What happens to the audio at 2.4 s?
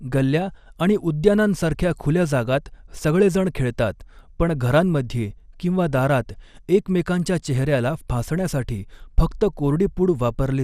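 A brief watery blip breaks through at 2.35 s, lasting a single frame. This is DAB burbling: a stray bit error, affecting only a tiny fraction of bits, slipped past error correction and corrupted a sample or scale factor, disturbing a sub-band within that frame. Around it the sound is dull and granular, with gurgling in the coarsely quantised bands. That is likely MP2 compression at a low rate, which fits about 80 kbps, where upper sub-bands get too few bits and drop out.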